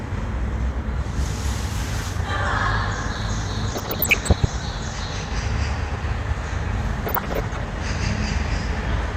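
From 3.70 to 4.45 s, and again from 7.06 to 7.62 s, short blips of noise in single sub-bands sit over the sound. This is DAB burbling. Weak reception left a bit error rate of somewhat under one percent, too many for the error correction to catch. Corrupted samples in the MP2 stream put short noise blips in single sub-bands, and corrupted scale factors make individual sub-bands jump in level for up to a frame. The length of each burst fits a few dozen affected frames.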